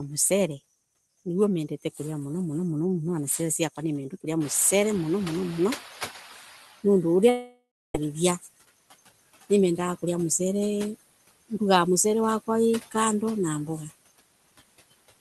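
Throughout the clip a noise suppressor works frame by frame, pulling down the frequency bands it judges to be steady background by about 19 dB. The result is noise that dips in the gaps and swells back under the speech.

From 1.69 to 1.99 s, just before "muno muno", the suppressor mistakes part of the speech for noise and cuts it along with the background, by about 10 dB at its deepest. Roughly a tenth of a second of sound is affected, so a soft consonant or word ending there comes out swallowed and faint.

At about 4.5 s the room's background noise jumps by about 22 dB. The suppressor's noise estimate lags behind this rise, so from 4.4 to 6.7 s it is catching up: for 2.3 s the louder noise passes through with little reduction and then sinks as the estimate adapts, ending about 11 dB lower. The raised room noise stays about 18 dB below the speech.

Within that stretch, from 6.33 to 6.43 s, the suppressor again cuts speech it took for noise, by about 9 dB, leaving a brief faint, swallowed spot.

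From 7.29 to 7.95 s there is a long network dropout, the likely cause being about 0.65 s of audio that never arrived. The receiver continues the last sound as a fading buzz or hiss, with 0.3 s of silence inside the gap. The speech then resumes further on, and the missing part is simply gone. The Opus call path limits the top end to around 12 kHz.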